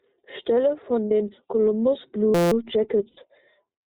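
Throughout, the speech carries iLBC codec character: band-limited below 4 kHz, slightly rough and synthetic, consistent with the 30 ms frame mode near 13 kbps. At 1.05–1.11 s, lost iLBC frames leave a 60 ms buzzy held vowel as the decoder repeats the last pitch cycle, pointing to two dropped frames. At 2.35–2.52 s, a system hang loop repeats a 5.8 ms segment about 30 times, a steady 172 Hz buzz that fits a 256-sample buffer, with little audio lost. At 3.08–3.18 s, a 90 ms loss produces the same breathy concealment, recovering immediately afterwards.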